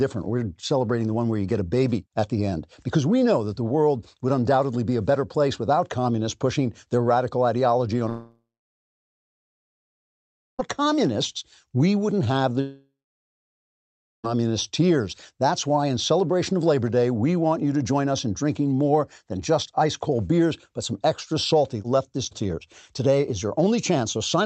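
At 8.09 s, right after "their radical ideology on", the speech smears into a fading buzz and then goes quiet for about 2.2 s. It returns at 10.61 s with "communists we wouldn't have", so about 2.5 s of speech is missing. The same thing happens from 12.61 to 14.26 s after "we wouldn't have the": about 1.3 s of silence and about 1.6 s lost. Both gaps are likely a long network dropout on a call path whose top end stops near 8 kHz.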